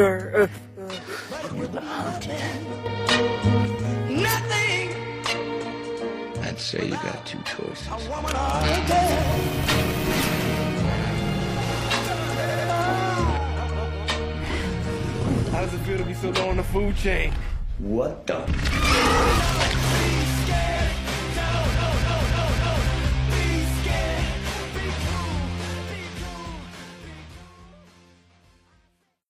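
At 0.58 s the level falls abruptly by about 6 dB. It recovers at 2.86 s. At 3.65 s it drops by about 6 dB again and stays down to the end. The sound is otherwise unchanged. The likely cause is one channel dropping out. Both channels carried the same sound, so losing one halves the mono sum.

From 12.45 to 12.64 s there are repeated frames. A 93 ms block plays twice more, adding about 0.19 s. It is heard as a short stutter. From 21.74 to 22.85 s a 279 ms block repeats four extra times. That adds about 1.11 s and gives a longer, looping stutter. In both cases the same compressed data reached the decoder more than once, so the same moment is played again.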